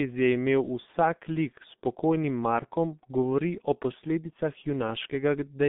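Speech runs muffled and hoarse from start to finish, with consonants smeared and nothing audible above about 3.8 kHz, the line band sitting roughly between 150 Hz and 3.6 kHz. That is heavy G.723.1 codec damage: the coder works in 30 ms frames and refreshes its vocal model slowly, so fast articulation blurs, and the coarse, rasping texture fits a very low rate of about 6.3 kbit/s.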